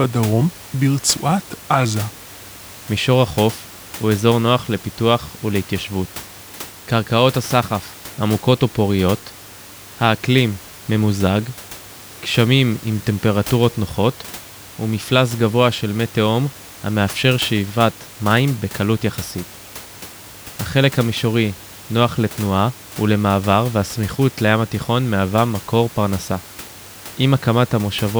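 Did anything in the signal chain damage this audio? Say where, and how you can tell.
Nothing in the signal chain damaged this audio; the only background is the room noise picked up by the microphone, sitting about 19 dB below the speech.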